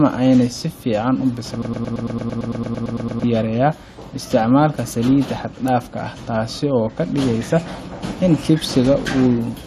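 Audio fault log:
1.62 to 3.24 s, broken-record loop: after "ena si fican u", a 0.11 s fragment of speech repeats identically 14 times before "yareya isticmalka salida xagdafka". The stream likely stalled and kept resending its last held piece, so the intended speech there is lost.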